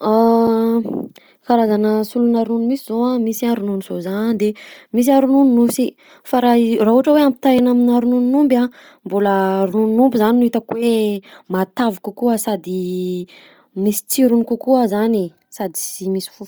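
Across the whole clip the speech carries a breathy, grainy edge in the upper range, most likely from Bluetooth LC3 compression at a low bitrate, which fits roughly 32 kbps with 10 ms frames. The heavy coding discards much of the high-frequency detail and replaces it with synthetic noise.

At 0.47 s, and again at 7.59 s, a block of digital silence cuts the signal out and back with no fade. These gaps last 4.33 ms and 1.12 ms, and each is heard as a tick or dip because of the abrupt edges where the audio drops out and resumes.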